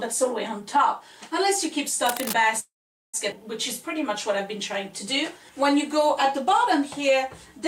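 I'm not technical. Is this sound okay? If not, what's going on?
No. Cable scratch noise, from 2.06 to 2.33 s: a burst of loud, uneven scratching sits over the sound for about a quarter of a second. That is likely a worn cable, plug or control being moved, making its electrical contact flicker.

Call audio freeze, from 2.59 to 3.16 s: the sound stalls for about half a second, a brief fading buzz, then mostly silence, before carrying on exactly where it stopped with nothing lost. This is likely call data arriving late, leaving the receiver waiting.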